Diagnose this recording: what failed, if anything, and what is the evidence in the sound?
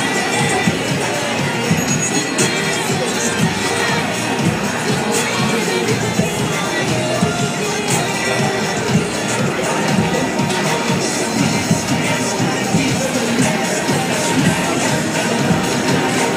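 Nothing failed at any stage: the sound carries no audible evidence of a dropout, distortion or other fault anywhere in the recording.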